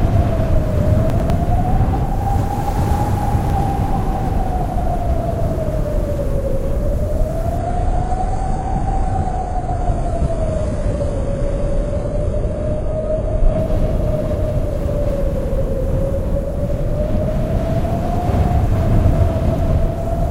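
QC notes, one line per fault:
1.1–1.3 s and 3.5–3.7 s, chunks out of order: each time a 100 ms chunk plays one chunk late, after the chunk that should follow it, so the sound briefly jumbles at three hard joins. The waveform shows steps at 100 ms boundaries, and the spectrogram shows thin broadband vertical lines.
7.58–13.58 s, adaptive stream at a lower bitrate: quality drops suddenly with no gap and the treble vanishes above 11.3 kHz. This fits a switch from a 96 kbit/s AAC stream to a 12 kbit/s HE-AAC one. The spectrogram shows a hard ceiling and smeared, patchy upper bands, and the waveform stays continuous.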